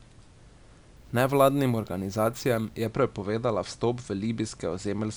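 From 0.97 to 2.87 s the speech picks up a bright, metallic fizz that rises and falls with the voice. This is imaging from sample-and-hold upsampling, consistent with a rate near 22 kHz being doubled to 44.1 kHz by simply repeating each sample with no smoothing filter. On a spectrogram, a mirrored copy of the speech harmonics fills roughly 11 to 22 kHz at about 26 dB below the signal, its lowest components sloping opposite to the pitch. Zoomed in, the waveform shows small stair-steps.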